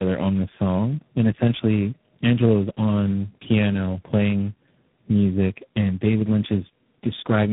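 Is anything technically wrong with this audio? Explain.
Yes. Tandem speech coding runs throughout: the speech has passed through three low-rate codecs in a row, which sounds like AMR-NB, then G.729A, then G.726, each re-coding the previous one's damage. The result is rough, muffled and warbly, with nothing above 3.8 kHz.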